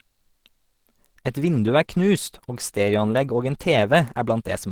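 A speech clip whose quality drops abruptly at 1.16 s and stays degraded to the end, with coding artefacts suddenly thicker and no gap at the switch. This is an adaptive stream at a lower bitrate, consistent with falling from about 64 to 16 kbit/s Opus after the connection slowed.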